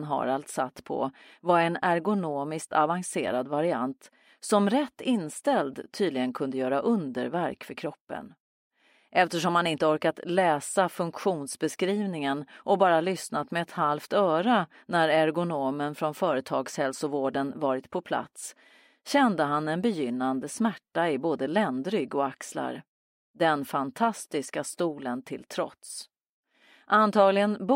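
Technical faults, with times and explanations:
No technical faults detected in the clip.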